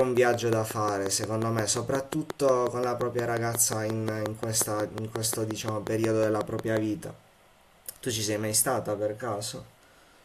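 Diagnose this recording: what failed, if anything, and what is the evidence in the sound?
A train of clicks runs from the start to 6.78 s: some forty near-identical pulses at a steady 5.6 per second, roughly 15 dB above the speech and audible in pauses. The regular spacing points to periodic interference, likely coupling into the analogue wiring.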